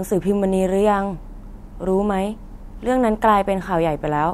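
No technical faults can be heard anywhere in the recording.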